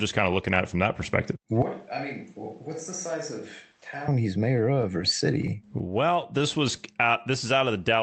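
A switch to a distant microphone runs from 1.62 to 4.08 s in this speech recording, starting right after "it from that perspective": the sound turns roomy and hollow, thinner in the bass, drops by about 10 dB and carries room noise only about 30 dB below the speech, likely because the close microphone's signal dropped out and a farther one took over. Scattered short gaps follow between 4.57 and 6.42 s: roughly ten tiny holes, the longest around 15 ms, were patched by extending the preceding sound, about 100 ms in all or some 7% of that stretch, heard as brief ticks and smears. Throughout, the audio carries the coding texture and 8 kHz top end of an Opus call path, which fits a rate around 24 kbps.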